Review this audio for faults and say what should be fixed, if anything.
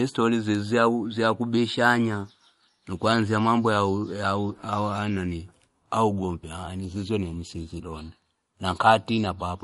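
Throughout, the speech sounds watery and swirly, with nothing above 11.2 kHz, likely MP3 compression at a bitrate around 48 kbps starving weak frequency lines. Encoding at a much higher bitrate, or keeping it lossless, would prevent this.

From 1.57 to 2.30 s the speech runs 5.25% fast and about 89 cents sharp, then snaps back: likely a drift correction step retiming playback in one jump. Correcting clock drift with gradual, continuous resampling would avoid this.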